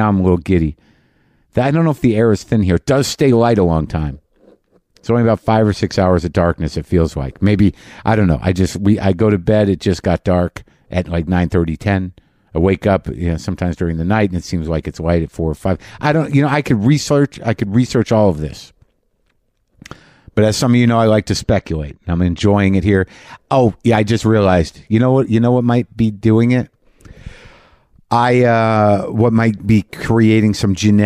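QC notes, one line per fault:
21.40–22.40 s, channel delay (comb filtering): one channel lags by a couple of samples, so the mono sum cancels around 10 kHz, dulling the top.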